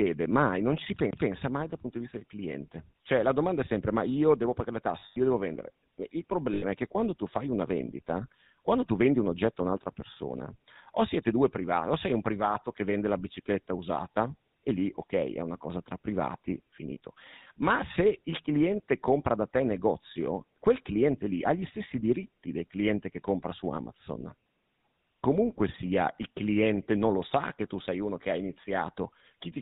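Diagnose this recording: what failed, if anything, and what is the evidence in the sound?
The failure is at the codec stage. The whole speech clip has passed through the GSM full-rate codec, and the damage is plainly audible. Nothing is heard above 4 kHz. The voice has a buzzy, gravelly edge throughout. That comes from the codec's design. It models the vocal tract and excites it with a sparse, regular pulse train, so fine detail in the excitation is discarded. The roughness points to the 13 kbps full-rate mode.

The second fault is in the network. Lost GSM frames occur twice. From 5.00 to 5.18 s, about 140 ms of audio goes missing, scattered over 160 ms. The longest single gap is around a tenth of a second. At 6.54 to 6.64 s, another 80 ms is lost. Each time the sound freezes into a rough, metallic ring. The decoder repeats the last good frame's settings. These gaps are too short to fade fully to silence.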